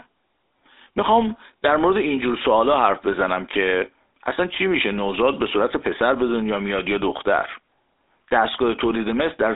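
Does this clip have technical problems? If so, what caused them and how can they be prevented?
Yes. The GSM full-rate codec has been applied from start to finish. This early mobile codec models the vocal tract with a short filter and drives it with a regularly spaced pulse excitation, keeping only every third sample of it, which leaves a buzzy, gravelly roughness on this speech that is plainly audible. The sound is confined to roughly 300 Hz to 3.7 kHz, with nothing above 3.8 kHz, which fits a 13 kbps GSM link. To prevent it, record or transfer the audio over a wideband path rather than a legacy GSM call.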